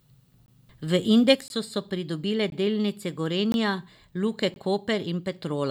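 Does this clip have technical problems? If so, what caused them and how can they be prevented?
Yes. Gaps between chunks: 20 ms hard-edged silences at 0.46, 1.48, 2.50, 3.52 and 4.54 s, one after each 1.0 s block of speech. The speech is delayed rather than lost, which fits chunks being padded or started late on playback. Buffer ahead and join chunks sample-accurately, trimming codec padding.

From 1.35 s to the end, the level drops abruptly by about 6 dB and stays there. The likely cause is one stereo channel dropping out, so the mono sum loses half of the shared signal. Monitor both channels and check the cable, interface or stream feeding the lost side.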